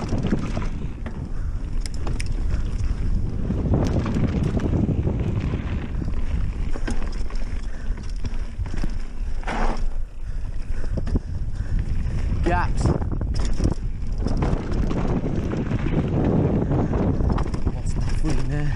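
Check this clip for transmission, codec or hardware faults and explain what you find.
One fault is present. Clock drift buffer slips occur from 0.43 s to 18.44 s as regular clicks every 0.6 s, likely from two mismatched clocks forcing about 15 samples to be dropped or repeated.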